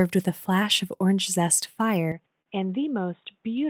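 Input switched to a poorer device, from 2.12 s to the end, right after "flash of orange zest": the sound abruptly turns dull and boxy, and drops by roughly 10 dB. There is no silence at the change. A faint new background noise, roughly 50 dB below the speech, appears. The likely cause is the recording input jumping to a narrower-band microphone or a headset's call profile, which brings its own tone, level and noise floor.

Short stall from a late packet, at 2.42 to 2.49 s: inside the duller stretch, one sound is held about 39 ms too long. A packet arrived late, the jitter buffer ran dry, and the receiver stretched the last audio to fill the gap. Playback then resumed from the same point, so nothing is lost, but everything afterwards runs 39 ms later.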